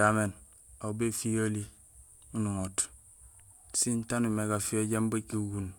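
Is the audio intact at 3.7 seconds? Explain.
Yes, at 3.7 seconds the speech plays through cleanly, with no dropout, click, distortion or other fault to be heard at that moment.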